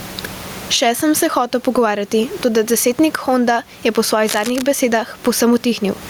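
Gain pumping runs through the whole speech clip, with level swinging by around 20 dB. Loud and soft parts end up closer in level and the sound is squashed, likely from excessive gain hitting a fast limiter. From 4.26 to 4.62 s, just after "je po", cable scratch noise adds dense, uneven crackling roughly 10 dB below the speech, likely a worn connector being moved. The room noise sits about 34 dB below the speech.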